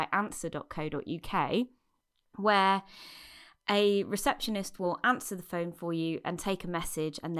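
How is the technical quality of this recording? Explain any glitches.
Nothing stood out as a technical problem on listening to this speech recording, so there are no glitches to explain.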